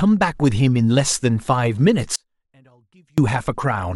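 At 2.16 s the speech drops out abruptly and stays gone until 3.18 s, about a second in all. This is an audio dropout to a faint residue. The gap isn't silent. A faint leak of the sound hangs on underneath, roughly 35 dB below its normal level. The cut and the return are both sudden, nothing like a natural pause or a fade. The likely cause is a signal interruption upstream while the path after the break stayed live.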